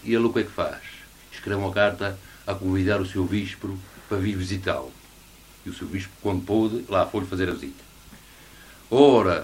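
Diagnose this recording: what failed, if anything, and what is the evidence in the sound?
A brief click at 7.51 s is a repeated buffer: the driver replayed one block, which points to a roughly 5 ms buffer, once.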